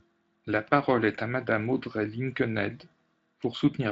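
No technical faults are audible.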